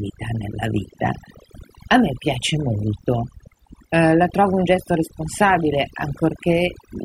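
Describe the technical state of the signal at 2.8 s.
At 2.8 s the speech sits over a near-silent background flecked with twinkling specks, the mark of overdone noise removal running throughout the clip. Frequency bands close to the noise estimate are cut far down, taking quiet parts of the voice with them.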